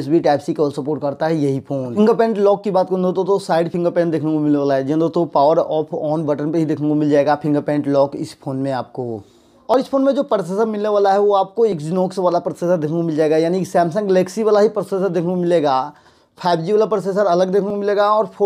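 Overlap between stream segments occurs at 3.74, 9.74, 11.72 and 17.70 s, each heard as a short click or small skip. Neighbouring segments carry time stamps that overlap, so the player trims away the overlapping stretch even though that sound was never duplicated. Between 6 and 13 ms of audio disappears each time, and the waveform jumps across the gap. The segments involved are 2 s long.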